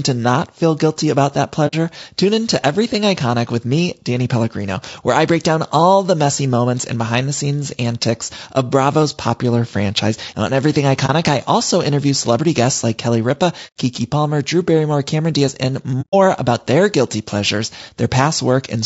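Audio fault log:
throughout: low-delay AAC compression. The speech is plainly rough and grainy, with noise filling the gaps between pitch harmonics and a thin, synthetic-sounding top band. This is likely AAC-ELD at around 32 kbps. Its short frames cannot separate closely spaced harmonics well and use up bits quickly, so at this rate the encoder smears energy between harmonics and rebuilds the highs coarsely.
1.67–1.75 s, 11.06–11.10 s, 13.67–13.75 s, 16.01–16.15 s: AAC frame loss with muting. Soft-edged holes appear after "feel guilty about that" and before "tune in to", at 13.67 s, and before "about their guilty pleasures", with a brief dip before "I also interview celebrity". The decoder zeroed the missing spectrum, and the overlapping windows fade the sound down and back up. The gaps fit one to four lost frames.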